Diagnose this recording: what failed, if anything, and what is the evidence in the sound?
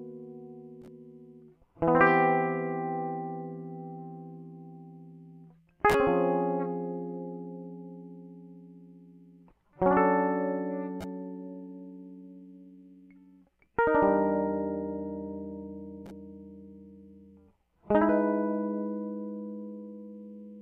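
No technical fault is audible.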